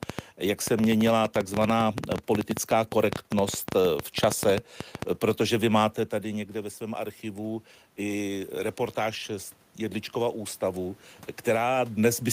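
From 0.03 to 5.03 s, just before "protože vy máte", a train of clicks ticks over the speech and its pauses: about 50 similar pops at an uneven 9.4 per second, peaking about 15 dB above the speech, most likely from interference by nearby equipment or a faulty connection or power supply.

From 6.1 to 11.03 s, after "protože vy máte", voice and room noise swell together by 7 dB. This is automatic gain rising: the talker moved back around 6.0 s, dropping the input by 12 dB, and the gain control slowly compensated.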